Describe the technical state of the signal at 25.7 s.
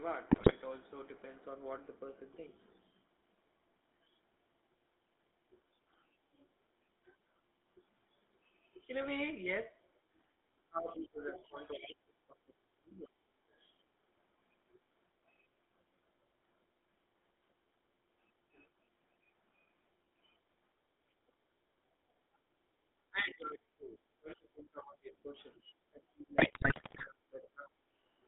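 At 25.7 s three faults overlap.

The whole clip carries the GSM full-rate codec. The sound has a buzzy, gravelly roughness. The band runs only from about 250 Hz to 3.7 kHz, so it is dull and boxy. The codec rebuilds the signal from a vocal-tract filter driven by a sparse, regular pulse train. That coarse excitation is what grinds on the sound. The damage is plainly audible, and the roughness fits a 13 kbps stream.

The talker's speech is being suppressed in double talk. The span runs from 23.1 s to 27.73 s, and about four seconds of it are affected. The level dips and drops out in pieces, at worst by about 30 dB. The likely cause is both ends talking at once. The echo canceller cannot tell near speech from loudspeaker echo, so it turns everything down.

The other side's voice is leaking through from 25.57 s to 25.72 s. It sits about 10 dB below the talker. It comes through as a brief scrap. 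The likely cause is the far-end voice playing on the talker's loudspeaker. The microphone picks it up, and the echo canceller does not fully remove it. At 25.7 s this leak is near its end.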